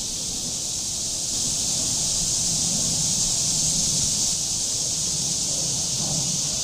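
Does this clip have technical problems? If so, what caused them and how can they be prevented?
Yes. There are dropped buffers (overruns) at 0.79, 1.90, 3.99 and 5.99 s. Each is a jump forward in the sound with no gap, skipping roughly 50 ms, or nearer 150 ms at 5.99 s. The likely cause is the capture software failing to read its buffer before the hardware overwrote it. Larger buffers and a higher-priority capture thread would prevent this.

A doubled audio track runs from 1.33 to 4.34 s. A full-band copy at about the same level follows roughly one second behind, with no decay or room colour, and starts and stops abruptly. This is likely a second capture path or an edit layering two offset copies. Routing the source once and checking the edit timeline would prevent this.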